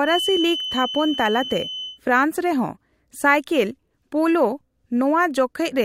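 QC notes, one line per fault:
0.00–2.00 s, feedback whistle: a thin, steady tone at 3 kHz sits behind the speech, roughly 10 dB below it, slowly swelling and fading in level, then stops at 2.00 s. The likely cause is the loudspeaker-to-microphone loop sitting just at the edge of feedback: at 3 kHz the loop gain is close enough to unity that the tone keeps circulating and sustains itself, but not high enough for it to build into a howl.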